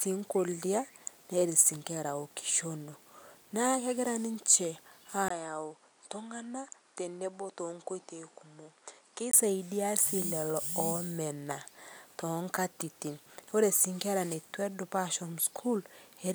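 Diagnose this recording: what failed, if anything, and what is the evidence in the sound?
At 5.28 s, right after "kegiraa ninshee", a 20 ms gap opens. The speech then turns duller and slightly quieter, with nothing above 10.1 kHz and faint new background noise. It clears at 9.33 s. The driver likely switched input to a poorer device.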